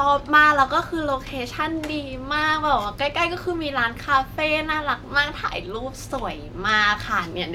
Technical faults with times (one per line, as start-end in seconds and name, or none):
none